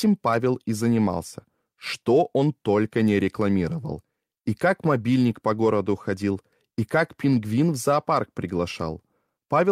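Nothing in the audio stands out as a technical fault, so there's nothing here to flag or explain.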